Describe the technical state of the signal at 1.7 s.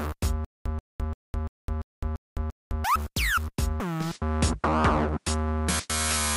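At 1.7 s the signal is in a stutter with silent gaps (0.45–2.84 s): a 133 ms burst repeats seven times, with 209 ms of digital silence between repeats, likely from a stalling stream.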